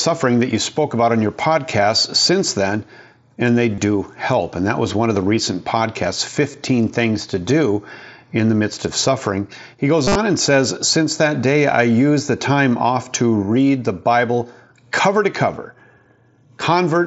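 Around 3.75 to 3.78 s, right after "since then and they", there's concealed Bluetooth headset packet loss: about 30 ms of audio never reached the phone, and the receiver filled it by repeating the best-matching recent stretch of waveform. The same happens at 6.52 s after "of the recent podcasts", just 15 ms. From 10.05 to 10.15 s, before "and says", about 90 ms dropped across roughly 105 ms, with one 45 ms run that comes through as a buzzy held tone and a small warble as the real sound resumes. Underneath, the mSBC headset link is audible in its usual way: 8 kHz bandwidth and faint graininess on loud sounds.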